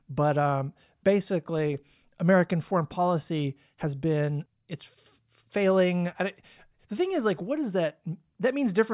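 Speech recording with no audible technical faults at any point.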